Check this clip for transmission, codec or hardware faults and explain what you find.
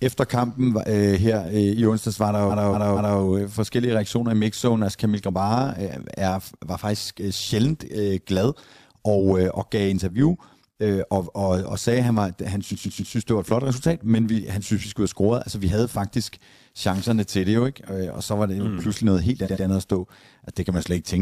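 Two faults are present: an overlap-add ripple across the whole speech clip, and three bursts of repeated frames.

The overlap-add ripple runs from start to end. Frames were rejoined with overlaps that do not sum to constant gain. Level swings by about 6 dB at around 100 Hz. It sounds like a metallic buzz with extra tones around each note.

Repeated frames stutter three times. A compressed block was played again, each repeat adding time. At 2.49 to 3.18 s, after "i onsdags var der" and before "øh forskellige reaktioner i", a 232 ms block plays three extra times, adding 0.70 s. At 12.70 to 13.12 s, between "at han var han" and "det var et flot", a 139 ms block plays three extra times, adding 0.42 s. At 19.44 to 19.62 s, between "mm pludselig noget helt" and "andet at stå", a 93 ms block plays twice more, adding 0.19 s.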